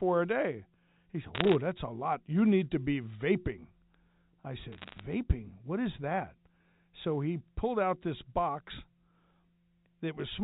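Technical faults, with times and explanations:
1.35–1.55 s and 4.72–5.00 s: bit errors on a digital phone line. Sharp ticks crackle over the speech just before "that's a lot", and again later. Bits flip at under one percent. Each flip corrupts one sample of the 8 kHz G.711 stream. Sign or high-bit hits make the loudest clicks.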